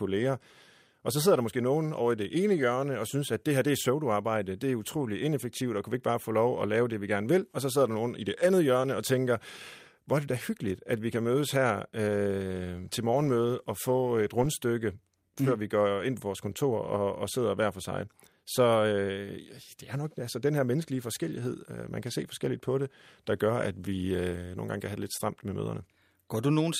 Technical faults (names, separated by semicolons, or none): none